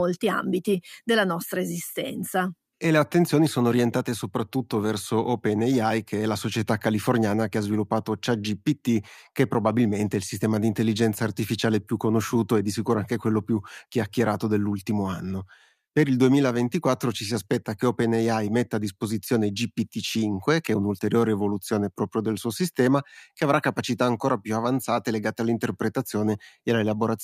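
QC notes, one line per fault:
Throughout: clock drift between sender and receiver. The sender's clock runs roughly 1% slow, so the receiver's buffer keeps draining and playback must be stretched to keep up.
0.70 to 26.59 s: repeated timing corrections. Short pieces are repeated at uneven intervals, adding roughly 0.3 s overall and giving a 99% tempo.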